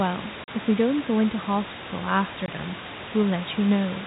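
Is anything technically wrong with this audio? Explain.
Yes. The audio suffers from packet loss filled with silence. At 0.44 s a 40 ms stretch of speech drops out, and at 2.46 s a further 20 ms is missing. Audio packets never arrived, and the receiver inserted digital silence instead of concealing the gap, so the holes fall in whole-packet steps, which fits 20 ms packets. The speech stops dead and restarts abruptly at each gap.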